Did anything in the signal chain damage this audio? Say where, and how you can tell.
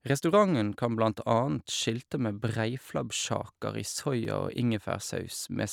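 Yes: overlapping chunks at the buffer stage. Stutters at 1.74 s and 4.25 s, 2.5 s apart, replay 12 ms where each chunk restarts before the previous one ends.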